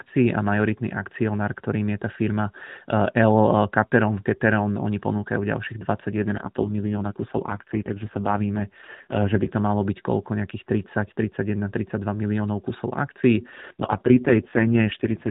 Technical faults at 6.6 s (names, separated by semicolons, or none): AMR rate drop